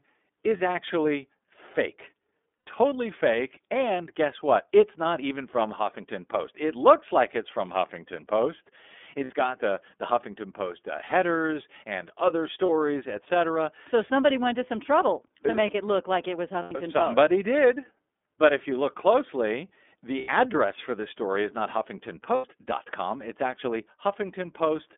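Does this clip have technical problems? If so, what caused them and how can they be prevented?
Yes, there are two related problems.

The whole clip has gone through the iLBC codec, and the damage is plainly audible. The band runs only from about 250 Hz to 3.5 kHz, so the speech sounds thin and boxy. Each 30 ms frame's excitation is coded on its own, which makes the speech a bit rough and synthetic. That fits iLBC's 13.33 kbps mode. To prevent it, use a wideband codec such as Opus when the link allows.

There are also lost iLBC frames at eight points:
0.57 s (30 ms)
2.64 s (90 ms)
9.24 s (60 ms), just before "got the the"
11.06 s (30 ms)
12.66 s (30 ms), right after "and other"
16.62 s (90 ms)
20.19 s (90 ms), between "you look closely the" and "address for this story"
22.35 s (90 ms)

Those lengths fit runs of one to three missing 30 ms frames. In each gap the decoder repeats the last pitch cycle mixed with noise, so you hear a short held, buzzy vowel. 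The longer gaps fade a little. Since iLBC frames stand alone, the speech snaps back straight away. To prevent it, reduce packet loss on the network with QoS or a better link, and add a jitter buffer or FEC.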